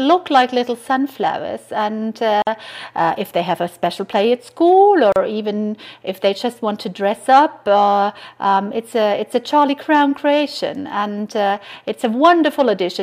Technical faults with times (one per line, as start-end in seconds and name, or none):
2.42-2.47 gap at a join of encoded pieces
5.12-5.16 gap at a join of encoded pieces